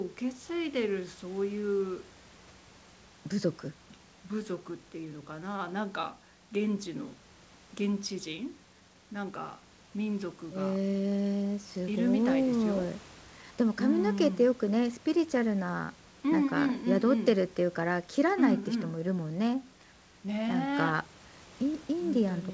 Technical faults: none

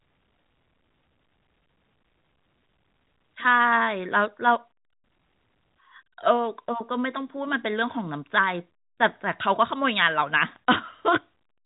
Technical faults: none

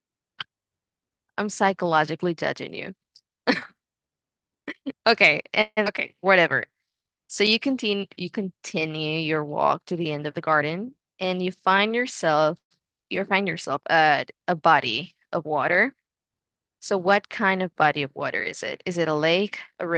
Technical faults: call audio freeze; skip ahead; jitter buffer slow-down; jitter buffer speed-up

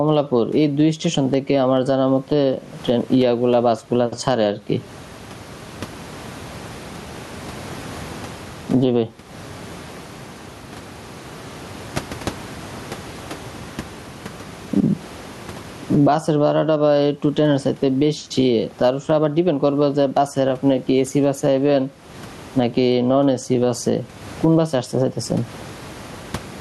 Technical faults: gain pumping

